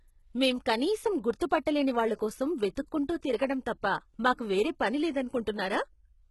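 Throughout the speech, s sounds turn gritty and metallic. Nothing exists above 11.8 kHz. Likely HE-AAC compression, rebuilding treble from lower bands, fitting 16 kbps.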